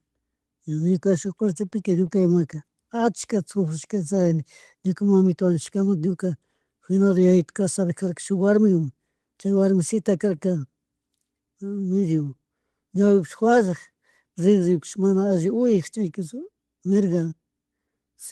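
Throughout the speech the pacing feels faintly dragged and uneven. This is clock drift between sender and receiver: the sender's clock runs about 2% slow, so the jitter buffer keeps draining.
From 1.25 s to 18.06 s, slight hiccups recur at uneven intervals. These are repeated timing corrections: the receiver repeats short pieces, stretching the speech to 98% speed and adding roughly 0.4 s overall.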